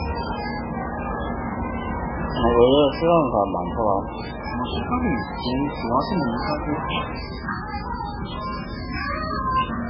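From start to end the audio carries heavy MP3 compression damage, most likely from encoding at a very low bitrate, in the region of 8 kbps. Nothing survives above about 5.3 kHz, and the remaining detail swirls and gurgles as weak frequency lines drop in and out from frame to frame, with transients smeared. A plain low-pass filter would dull the top end the same way but leave what remains steady, without the watery, churning texture.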